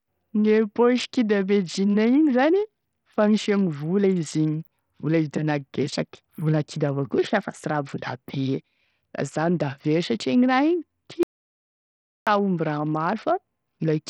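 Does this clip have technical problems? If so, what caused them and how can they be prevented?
Yes. Throughout the speech the treble thins and flickers under a gritty grain, which fits Bluetooth SBC compression at a bitrate around 64 kbps, likely starving the upper sub-bands. Unlike MP3 swirl, the damage is coarse and uniform. Use a higher bit pool or AAC.

From 11.23 to 12.27 s the sound stops dead for about 1.04 s in silence with no room tone. That marks an audio dropout to silence, likely a lost input link, rather than a pause, which would keep background noise. Secure connections and monitor input.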